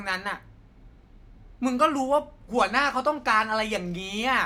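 No dropouts, glitches, distortion or other technical faults can be heard anywhere in the recording.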